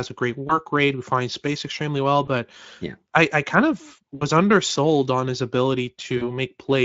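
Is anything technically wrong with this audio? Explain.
Yes. There is VoIP packet loss concealed by the speech codec at 0.47–0.59 s (after "a great"), 2.25–2.28 s (after "finds space extremely well"), 4.15–4.23 s (after "I I kind of") and 6.17–6.29 s. The gaps, about 20, 20, 60 and 40 ms, fit one to three lost 20 ms frames. The decoder extrapolates from its last pitch and filter state, so each gap becomes a brief buzzy or noisy, fading smear that recovers a little after the audio resumes. The longest is at 4.15 s, before "undersold on his".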